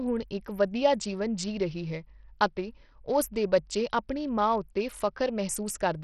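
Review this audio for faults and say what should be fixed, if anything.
The speech has likely passed through Bluetooth SBC compression across the whole clip, with a small bit pool that fits a rate of about 64 kbps. The codec starves its upper sub-bands of bits and quantises the rest coarsely, so the treble thins and flickers, nothing survives above 16.9 kHz, and a heavy gritty, aliased roughness rides on every syllable from start to finish. To prevent it, record over a wired path, or raise the SBC bit pool or switch to a higher-quality Bluetooth codec.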